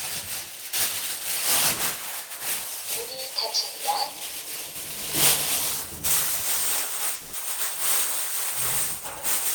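At 7.15 s the sound breaks down into a buzzy, smeared continuation of whatever was just playing, fading over roughly 180 ms instead of dropping to silence, and the real audio picks up again at 7.36 s with that slice simply gone. That's most likely a long network dropout: nothing arrived for that stretch, so the receiver kept extending the last sound to cover the hole, and about 180 ms of the original never got played.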